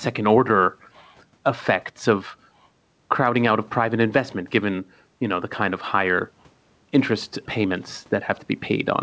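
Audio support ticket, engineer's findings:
Gain pumping, whole clip. Likely input gain set far too high, with a fast limiter or compressor clamping on every loud syllable. Level swings around 10 dB; room noise sits about 43 dB under the speech. Dynamics squashed flat. Band stops at 8 kHz, which fits a wideband call codec such as G.722.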